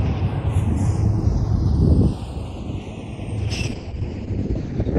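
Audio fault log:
Throughout: channels drifting apart. The two channels run on clocks that disagree by something like 100 parts per million, so the delay between them creeps steadily and reaches roughly half a millisecond by the end. Any mono fold-down sums two slightly offset copies, producing comb-filter notches that glide slowly across the spectrum. The result is a moving flange-like colouration that shifts gradually across the clip.
3.39 to 4.98 s: call bitrate drop. The encoder's rate was pulled down hard, consistent with a fall from around 96 kbps to around 10 kbps, and it sits at the lowest level for about 1.35 s. At that rate Opus quantises coarsely and narrows the audio band, here from 20 kHz down to 8 kHz. The top end goes dull and muffled, with a rough, watery texture, and it does not recover before the audio ends.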